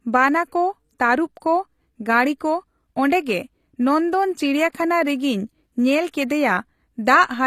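Throughout, the treble above 14.9 kHz is gone and the upper band sounds gritty and metallic, likely HE-AAC compression rebuilding the highs from lower bands at a bitrate that fits about 24 kbps. From 4.70 to 4.74 s, pre-echo appears: block-wide quantisation noise spills about 49 ms ahead of an attack, leaving a brief hiss and a softened onset.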